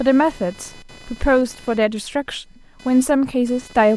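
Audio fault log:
Throughout: computer activity noise, a buzzing around 500 Hz sitting about 25 dB under the speech, from processor or graphics load disturbing the audio circuit's shared ground.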